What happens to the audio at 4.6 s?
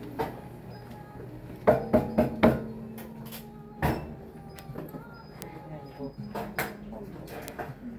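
At 4.59 s there is a bit error spike: one sample jumps to about -16 dBFS and immediately returns, as a single flipped bit would do. It sounds like one sharp, broadband tick with no relation to the surrounding audio.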